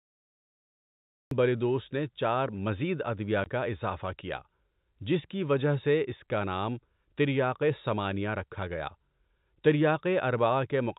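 Right at the top there's a cut-off start: digital silence until 1.31 s, then the speech jumps in mid-sound with "بلیدوس نے چار مزید". The recording clearly started late, so there's no natural onset, just an abrupt edge that may click.

At 3.44 s comes packet loss filled with silence, a single 20 ms hole between "نے چار مزید ادویہ" and "کا اِضافہ کیا". That length points to one lost 20 ms packet. The receiver played silence in its place, so you hear a brief dropout with hard edges, cut into speech that sounds like ordinary telephone audio, band-limited to about 4 kHz.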